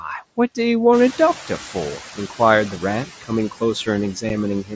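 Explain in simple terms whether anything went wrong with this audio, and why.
Yes, a few things went wrong, all tied to the call's noise handling and its Bluetooth link.

Throughout the clip, the background noise doesn't stay steady. It dips between stretches of speech and swells back up underneath them. These are noise suppressor artifacts. The call's noise reducer works in tiny time slices, turning down whichever frequency bands it judges to be constant noise. As its decisions shift from slice to slice, the leftover noise pumps instead of sitting still.

At about 0.93 s the room noise suddenly gets louder, and for roughly a fifth of a second, until about 1.15 s, it comes through stronger before settling down again. This is the noise suppressor catching up. The reducer keeps a running estimate of what the background sounds like. When the room got noisier at around 1 s, that estimate was out of date, so the new noise slipped through with only partial reduction until the estimate adjusted, about 220 ms later.

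At 4.29 s there is a tiny, abrupt gap, a brief hole in the sound with sharp edges. This is unconcealed Bluetooth headset packet loss. The headset sends the audio to the phone in very small chunks, and this gap, about 7.5 ms long, fits a single chunk going missing. Nothing was done to smooth over the hole, so the audio simply drops out for that instant and then resumes.

Right at the end, from about 4.64 s to 4.73 s, the speech turns faint and swallowed for roughly a tenth of a second, as if the tail of the sound were muffled away. This is speech cut by the noise suppressor. The reducer mistook this quiet part of the speech for background noise and turned it down along with the background, so the speech itself lost volume there.

The sound also has a slightly narrow, phone-call character, with nothing above 8 kHz. That comes from the call's normal microphone processing and the wideband mSBC headset codec.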